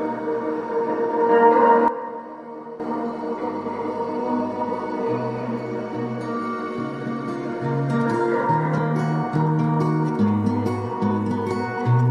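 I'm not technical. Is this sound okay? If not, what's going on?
No. There is a sudden gain jump at 1.88 s: the whole sound, background hiss included, abruptly turns much quieter, then snaps back to its normal level at 2.80 s. The level changes instantly rather than fading, so the step is easy to hear. The likely cause is a volume setting inside the recording or playback chain being changed in one go, without the gradual transition that would make it smooth.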